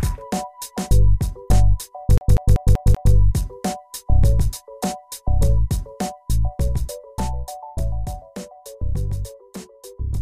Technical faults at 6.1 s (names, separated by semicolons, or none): none